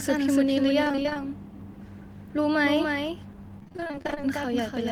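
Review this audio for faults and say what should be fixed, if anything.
Throughout the clip there is a doubled audio track. A full-band copy of the speech trails the original by roughly 300 ms, about 5 dB quieter, with no decay or room colour. The likely cause is a second capture path or a misaligned edit layered onto the main signal. To prevent it, make sure only one capture path feeds the mix, or remove the duplicate track in the edit.

Repeated packet loss (robotic sound) occurs from 0.83 to 1.17 s and from 3.59 to 4.22 s. In both stretches short holes, the longest 20 ms and 29 ms, follow one another rapidly. Each hole is patched by extending the preceding sound, so nearly half of each stretch is filler, giving a choppy texture with pieces missing. To prevent it, stabilise the network link and increase jitter-buffer depth so packets arrive in time.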